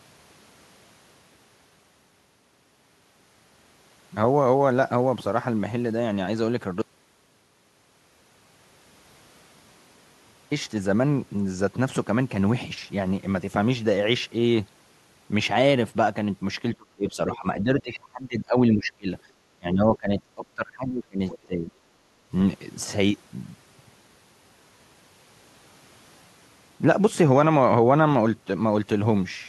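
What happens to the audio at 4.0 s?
Nothing goes wrong at 4.0 s; the speech runs on intact through that moment, with no dropout, click or distortion.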